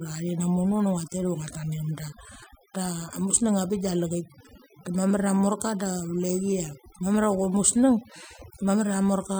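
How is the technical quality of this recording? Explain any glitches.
The recording is marred by overdone noise removal, present from start to finish of the speech. A noise reducer set far too aggressively has pulled individual frequency bands down or out whenever they sat close to its noise estimate, taking the softer parts of the voice along with the noise. The pauses fall to near silence sprinkled with twinkling, chirpy specks. Unlike a noise gate, which mutes everything at once, this works band by band, so isolated tones flicker on their own.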